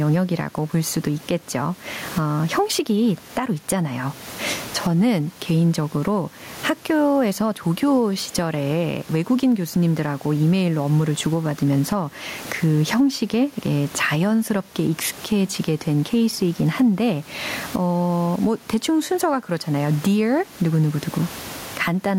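Speech with gain pumping throughout: the background noise sits about 33 dB below the speech, and the gain swings by roughly 20 dB. Likely cause: input gain set far too high, with a fast limiter clamping it. A waveform looks flattened and dense, and a spectrogram shows the noise floor brightening between phrases.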